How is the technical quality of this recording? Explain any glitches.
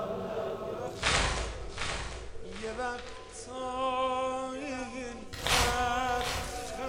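The recording has one clear glitch: a digital radio blending to analogue. From 0.89 s to 5.40 s, a steady hiss at about 35 dB below the signal appears, while the level stays the same. The receiver lost its digital stream and cross-faded over 166 ms to the station's FM broadcast, then faded back.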